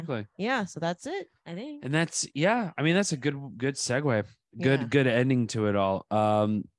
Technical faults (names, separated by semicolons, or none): none